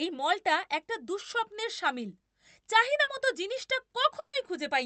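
At 3.03 s comes a short concealed packet loss: about 40 ms of audio never reached the decoder, so the receiver extended the preceding sound and blended back in. It is a brief smear rather than a gap, because nothing goes silent.

From 4.19 to 4.34 s a burst of packet loss covers about 140 ms. Concealment first holds the last sound, then fades it, leaving roughly 70 ms of silence before the speech returns with the lost stretch gone. The audible dropout and skipped material set it apart from the earlier smear. Throughout, the Opus call path limits the audio to about 8 kHz.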